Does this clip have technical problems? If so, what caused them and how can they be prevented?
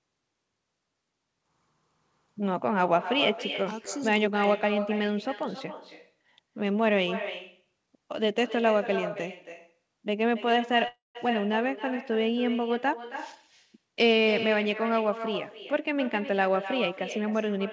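Yes. There are three problems.

Echo with no canceller runs through the whole clip. The far end played the call on a loudspeaker, its microphone captured that playback, and nothing subtracted it, so the sound returned across the network. Every phrase is followed roughly a third of a second later by a thinner copy about 10 dB quieter, which makes the talker seem to trail themselves. Prevention: enable acoustic echo cancellation at the far end, or have that participant use a headset.

A call audio freeze occurs from 10.88 to 11.17 s, likely caused by packets held up in transit until the jitter buffer emptied. The receiver bridged the hole by stretching the last sound into a fading buzz, about 150 ms of which decays into silence. The audio then resumes exactly where it stopped, so about 270 ms of gap is inserted and nothing is lost. Prevention: improve network stability or prioritise call traffic so packets arrive on schedule.

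A jitter buffer speed-up follows from 14.45 to 17.66 s. The buffer had built up more audio than its target, probably from the delayed packets arriving together after the freeze. To cut latency, the receiver repeatedly removed pitch-period-sized slices, about a fifth of a second in total. The sound plays about 5% faster at unchanged pitch and feels slightly rushed. Prevention: reduce the bursty delivery behind this catch-up, again through a steadier network path.

The band limit at 8 kHz fits the G.722 call codec.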